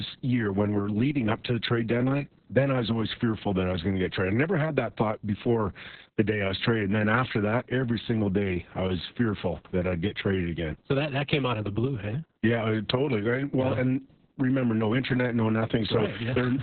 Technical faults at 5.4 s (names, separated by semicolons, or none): Opus voice compression